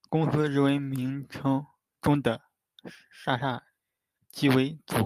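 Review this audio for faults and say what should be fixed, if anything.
No faults can be heard in this speech recording. Nothing needs to be fixed.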